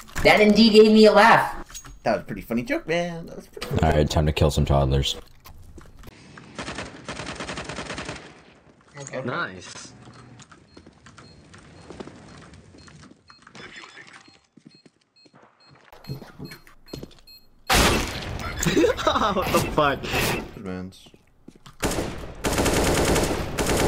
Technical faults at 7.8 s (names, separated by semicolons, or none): input switched to a poorer device